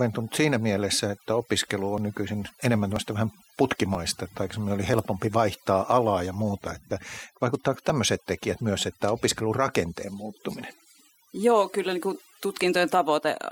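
Overdone noise removal runs from the start to the end of this speech. The reduction was set so strong that every frequency band sitting near the estimated noise floor is pulled down or shut off, and the quieter parts of the voice go with it. Between phrases the background drops to near silence speckled with twinkling, chirpy fragments. Unlike a low-bitrate codec's smearing, the damage tracks level: it is worst in the soft passages and pauses.

Layered on top is an overlap between stream segments, heard as a small click or skip at 0.99, 1.98, 2.96, 3.95, 4.94, 5.92, 6.91 and 7.90 s. The segments are about 1.0 s long, and at each boundary their time stamps overlap, so the player trims a few milliseconds it wrongly treats as duplicated. The waveform jumps straight across the missing piece. What separates this from packet loss is that nothing is left blank: there is no gap or muted stretch, just a tiny jump forward recurring almost exactly once per second.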